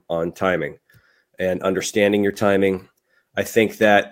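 A speech recording with one fault. At 2.34 to 2.40 s there is loose connector crackle, a short irregular burst of scratching. A worn or dirty contact is making and breaking as it shifts. Each break chops the signal, and any DC on the line adds pops.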